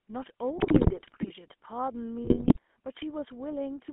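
A short speech clip with the GSM full-rate codec running all the way through, and you can plainly hear it. The voice has that buzzy, gravelly edge from the pulse-driven vocal-tract model, and the band sits at roughly 250 Hz to 3.4 kHz, which fits a 13 kbit/s full-rate link. On top of that there are two bursts of GSM bit errors, from 0.57 to 1.31 s and from 2.24 to 2.59 s. Corrupted filter, pitch and gain values turn the voice into squawks, pops and gargling there, which points to a few percent of bits flipped on a weak link.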